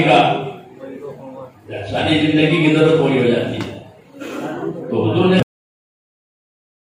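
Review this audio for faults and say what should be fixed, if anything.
Cut-off end at 5.43 s: the final buffers were never written, so the sound stops mid-event and drops straight to silence with no decay. Prevent it by flushing and draining all pending buffers before closing the file or stopping playback.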